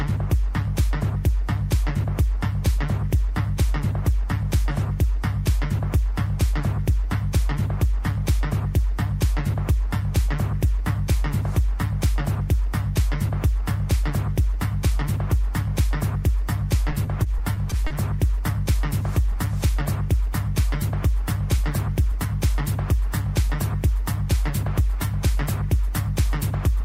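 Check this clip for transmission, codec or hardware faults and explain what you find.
One transmission fault stands out: repeated stalls (stutter) between 16.91 and 17.92 s. Late packets let the jitter buffer drain seven times. Each time the receiver stretched the last sound to cover the wait, about 90 ms in total and none longer than 30 ms, so nothing is lost. The audio briefly drags and hiccups. A spectrogram shows short smeared, repeated slices, and the waveform shows brief copied segments.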